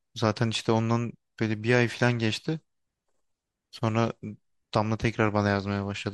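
Throughout the speech s sounds turn metallic and chirpy, and the background swirls with a watery texture. This plainly audible damage is likely MP3 compression at a low rate, which fits roughly 64 kbps, where starved bits leave faint frequency lines flickering between frames.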